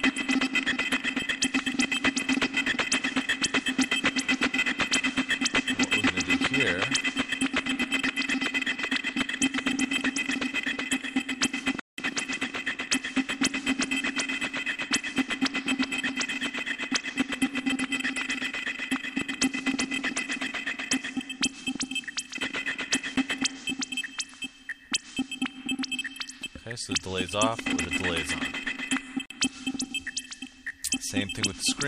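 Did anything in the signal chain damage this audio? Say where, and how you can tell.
Yes. The driver or buffer stage missed its deadlines three times, leaving blocks of digital silence: a 186 ms hole at 11.80 to 11.98 s, a 12 ms tick at 23.16 s, and a 46 ms gap at 29.26 to 29.30 s. The lengths fit unfilled 8192- and 2048-sample buffers.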